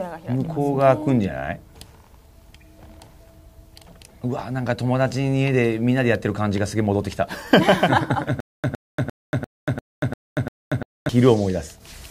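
From 8.40 to 11.09 s the audio breaks into a stutter with silent gaps: a 111 ms fragment plays, then about 235 ms of dead digital silence, and the same fragment returns seven times on a steady 346 ms cycle. The playback or stream most likely stalled and replayed its last buffer at each retry. Unlike a plain dropout, the identical burst keeps recurring, and the material meant for that span never arrives.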